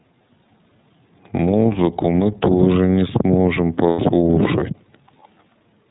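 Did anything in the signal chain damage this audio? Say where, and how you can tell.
Yes, at the codec stage. The speech runs through the iLBC codec for the whole clip, and the damage is plainly audible. Nothing reaches above 4 kHz, so the top end is gone. The voice has a rough, slightly synthetic edge. iLBC codes each frame's excitation on its own, without leaning on the previous frame. The sound fits its 30 ms, 13.33 kbps mode. That coarse coding of a narrowband signal is what roughens the timbre.

The network stage also did damage, with lost iLBC frames from 3.90 to 4.00 s. The gap lasts about 90 ms, which fits three 30 ms frames. Instead of silence, you hear a held, slightly buzzy vowel. That is the decoder's concealment. It repeats the last pitch cycle and mixes it with noise. The speech comes back clean almost at once afterwards, because each iLBC frame decodes independently.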